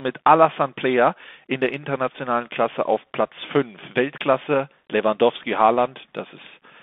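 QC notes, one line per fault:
Throughout: Bluetooth CVSD headset codec. The speech is confined to a narrow telephone band of roughly 250 Hz to 3.5 kHz, with no air above and thin lows. Each sample's single up-or-down bit at 64 kHz, which fits a 64 kbps link, forces an adaptive step that lags on loud, fast-rising sounds, giving plainly audible slope distortion, scratchy sibilants and a grainy hiss riding under the speech. That granular, sample-level roughness separates it from the smooth band-limiting of a clean narrowband filter.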